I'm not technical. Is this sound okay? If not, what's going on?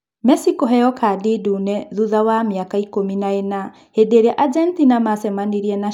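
Yes, nothing here sounds wrong or broken.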